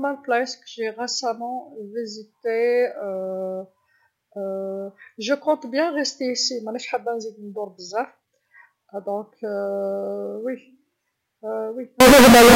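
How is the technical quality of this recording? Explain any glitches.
The recording has one clear glitch, right at the end. From 12.00 s to 12.56 s the speech abruptly turns into a very loud, harsh, buzzing blare. This is likely a float read as integer fault: 32-bit float samples interpreted as 32-bit integers, so each sample's sign and exponent bits dictate its level. The waveform goes almost square at an almost fixed, high level, and background noise becomes as loud as the speech, though pitch stays traceable. Ordinary clipping would only flatten the loudest peaks, leaving quiet passages and the noise floor intact.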